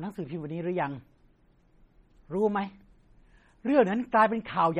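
Heavy MP3 compression runs throughout, likely from a starved bitrate near 32 kbps. Weak frequency lines flicker between frames, making the speech sound watery and swirly.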